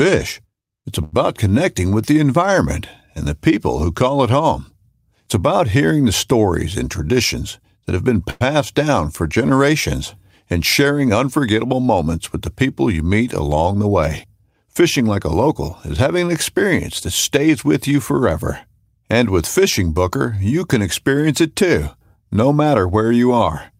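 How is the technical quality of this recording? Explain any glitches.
Three kinds of network playback glitch interrupt the speech.

At 1.03 to 1.15 s, just before "connecting with the environment", a sound is held about 91 ms too long with a slight buzz or dip. This is a short stall from a late packet: the jitter buffer ran dry and the last sound was stretched until the data arrived.

From 6.36 to 7.78 s, between "about hearing the" and "that have been", the speech runs about 5% faster at unchanged pitch and sounds hurried. The same happens at 16.06 to 16.75 s, about 6% faster. This is jitter buffer speed-up: tiny pitch-period slices were trimmed repeatedly to shed excess delay, roughly a tenth of a second in the first stretch and about half that in the second.

At 8.30 to 8.43 s, after "that have been" and before "down for generations and", a buzz or hiss continuation of about 105 ms fills the flow without dropping to silence. 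This call audio freeze was likely caused by packets held up in transit that emptied the buffer, after which playback resumed where it stopped.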